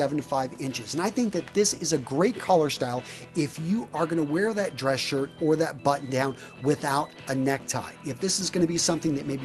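No technical faults can be heard anywhere in this audio.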